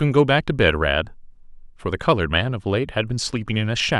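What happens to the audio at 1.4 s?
Nothing goes wrong at 1.4 s: the speech there runs on intact, with no dropout, click, glitch or other audible fault.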